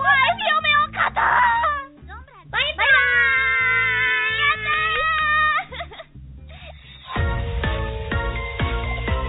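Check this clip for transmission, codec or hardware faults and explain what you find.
No faults found; the audio shows the ordinary character of a G.711 A-law call path at 64 kbps, with nothing above 4 kHz as that narrowband codec dictates.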